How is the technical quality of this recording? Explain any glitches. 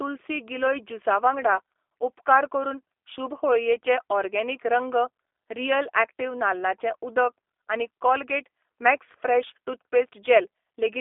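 The quality is held back by one fault running the whole way through: the speech has clearly been carried over a G.729 codec. From start to finish the band sits roughly between 300 Hz and 3.5 kHz, with nothing at all above 3.6 kHz, so the top end is simply gone. The damage is plainly audible. The coder rebuilds each short frame from a vocal tract filter, a pitch predictor and a handful of pulses instead of the actual waveform, which gives the voice a slightly rough, synthetic edge. That sound fits the 8 kbit/s G.729A variant.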